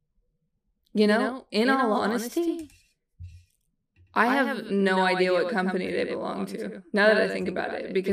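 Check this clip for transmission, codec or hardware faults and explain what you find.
One fault runs through the whole clip: a doubled audio track. Every sound is followed about a tenth of a second later by a second, full-band copy a few decibels quieter, giving a slapback, stuttering edge with no reverberant tail or room colour. That pattern is likely from the same signal being mixed in twice, once directly and once through a slower path or a misaligned edit, so the two copies sit out of step by a fixed delay.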